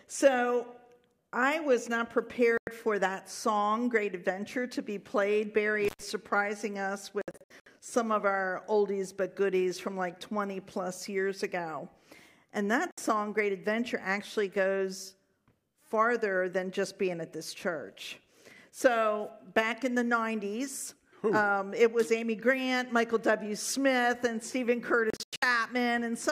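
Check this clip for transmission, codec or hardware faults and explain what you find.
Two kinds of fault are present: four digital broadcast dropouts and one intermittent contact.

Digital broadcast dropouts occur at 2.58 to 2.68 s (about 96 ms lost), 7.22 to 7.67 s (256 ms in short holes scattered over 448 ms, longest 64 ms), 12.91 to 12.98 s (64 ms), and 25.10 to 25.43 s (224 ms in holes over 320 ms, longest 96 ms). The receiver mutes whenever incoming frames are corrupted or missing, so the sound drops cleanly to silence and resumes later in the programme, with that stretch gone. The gap lengths, all multiples of 32 ms, point to frame-sized muting.

The intermittent contact occurs at 5.85 to 6.03 s, with the line open for about 112 ms. A loose plug or cable briefly breaks the connection, so the sound cuts out with crackle at each edge and faint hiss remains during the open interval.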